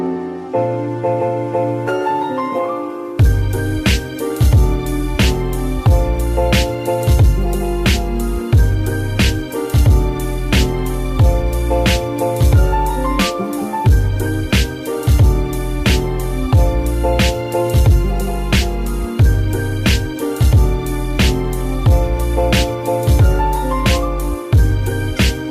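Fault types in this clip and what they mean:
No technical faults can be heard anywhere in this audio.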